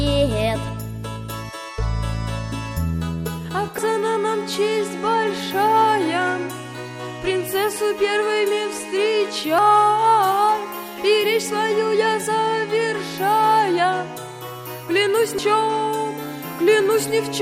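At 3.78 s, 9.58 s and 15.38 s the sound jumps forward abruptly, as if roughly a fifth of a second had been cut out and the two sides butted together with no gap. The regular spacing points to audio missing between chunks, likely from a process handling the signal in 6-second blocks. On a waveform or spectrogram each skip is a hard vertical seam where the patterns on either side fail to line up, with no silent stretch between them.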